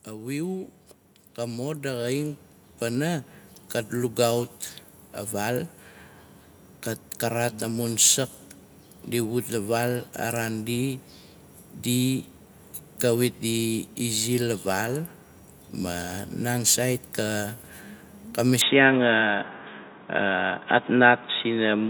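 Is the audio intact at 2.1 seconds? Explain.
No. At 2.1 seconds the speech and the background beneath it are swelling upward together, a slow, even rise in level rather than a jump. This is automatic gain rising, running from 0.05 to 5.8 seconds and adding about 11 dB in total. The gain control judged the incoming signal too quiet and kept turning its own amplification up step by step, so everything it passes, voice and room alike, grows louder across those several seconds.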